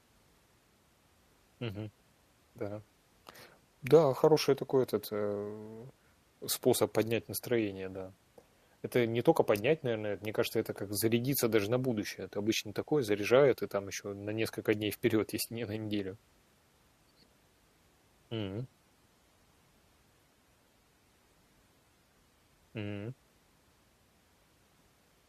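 From 18.63 to 22.63 s the speech abruptly degrades, with codec artefacts rising and no gap, then snaps back. This is an adaptive stream at a lower bitrate. The connection slowed, and the player switched to a much leaner Opus encode, roughly a quarter of the rate.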